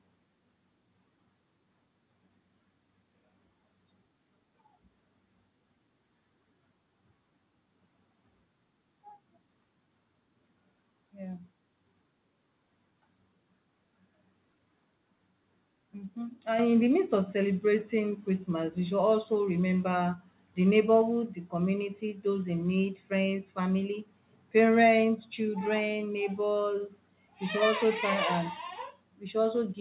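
At 16.6 s the microphone volume is stepped up: the call software judged the input too quiet and raised the device's input gain by about 6 dB in a single move, so the speech and the room noise behind it jump louder together. On a waveform the envelope widens abruptly at that point; on a spectrogram every band brightens at once, though nothing appears above 4 kHz, consistent with a narrowband G.711 call path.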